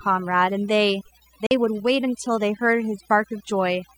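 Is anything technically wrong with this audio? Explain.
Yes, there are three faults. Throughout, mains hum is present: a ground loop or nearby transformer is leaking the 60 Hz power line into the signal, giving a steady low tone roughly 10 dB below the speech. Also throughout, overdone noise removal has pushed frequency bands near the noise floor down too hard, so the background sits in near silence with twinkling specks. From 1.46 to 1.51 s there is a gap of about 43.5 ms, likely a Bluetooth dropout from a few packets missing the headphones in time, after which the speech resumes as though it had kept playing.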